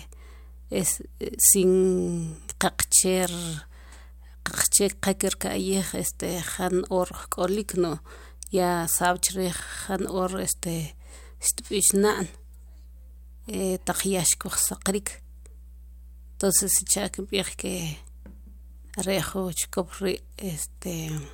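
From start to finish there's mains hum sitting under the speech, a steady low tone at 60 Hz with a few low harmonics stacked on top. That's the power line leaking into the signal path, most likely through a ground loop or a transformer sitting too close to the cabling. The hum runs around 20 dB below the speech, so you hear it droning through every pause.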